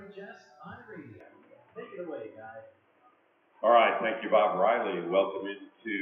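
Input switched to a poorer device at 1.20 s, lasting to the end: without any gap, the sound turns dull and boxy, with nothing above 3.4 kHz, shifts in level by around 5 dB, and gains a new background noise some 40 dB down, likely from the recording jumping to another microphone or headset.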